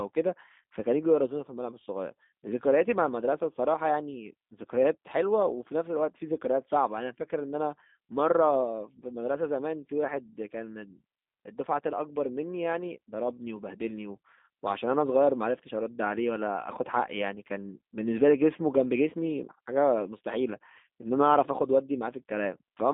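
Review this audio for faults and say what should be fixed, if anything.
The call path squeezed this speech through a G.729 codec, which fits an 8 kbit/s VoIP link, throughout. Rebuilding it from a vocal-tract filter and sparse pulses leaves it plainly rough and synthetic, confined to about 200 Hz to 3.7 kHz. To prevent it, negotiate a wideband codec such as G.722 or Opus at a higher bitrate on that link.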